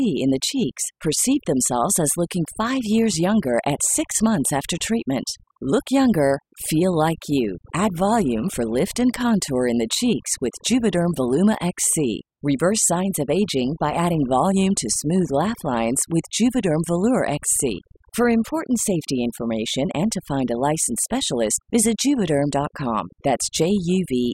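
From start to finish the speech carries overdone noise removal. A noise reduction stage was set far too aggressively, so any frequency band sitting close to its noise estimate is pulled right down or cut out, and the quieter components of the voice are cut along with the noise. Between phrases the background collapses to near silence scattered with twinkling, chirpy specks.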